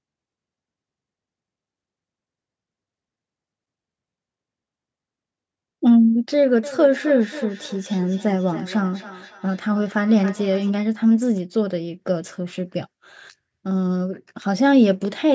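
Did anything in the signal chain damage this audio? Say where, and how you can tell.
Yes. Between 6.63 and 10.77 s the speech comes back at a fixed spacing of roughly 300 ms, peaking at about -16 dB below the direct speech. This is feedback echo between two devices: a second device in the room played the call audio, and the first microphone picked it up again. Each echo canceller removes only its own playback, so this loop survives. Room reverberation would smear continuously with no regular interval. The sub-8 kHz bandwidth comes from the call's microphone processing.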